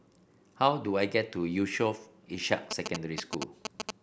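Speech, with GSM signalling bursts from 2.71 to 3.91 s. A galloping dit-dit-dit of short buzzes cuts in, repeating at 217 Hz and roughly as loud as the speech. A nearby 2G phone is signalling, and the audio circuit rectifies its radio bursts.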